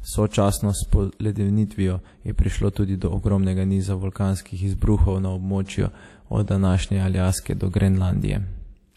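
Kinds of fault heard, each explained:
WMA compression: plainly audible ringing, washy smear and hiss breathing with the speech, which fits a transform codec at about 48 kbps; spectrogram empty above 14.8 kHz, weak bands gappy.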